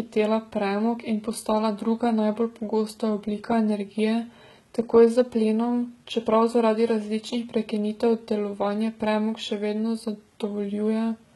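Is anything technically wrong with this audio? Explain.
Yes. Throughout the speech there's heavy HE-AAC compression damage, likely from a very low bitrate, around 16 kbps. The treble above the coded band is rebuilt by copying lower bands upward, so sibilants come out gritty and metallic, and nothing survives above 11.8 kHz.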